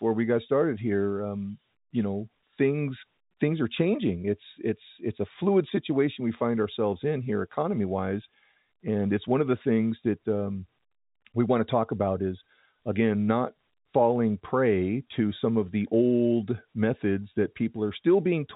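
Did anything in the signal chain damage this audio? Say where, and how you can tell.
No, nothing in the chain damages this speech; it is carried over G.711 telephone coding, which fits A-law at 64 kbps, and the band stops near 3.8 kHz as that format requires, with at most a faint trace of its level-following quantisation noise.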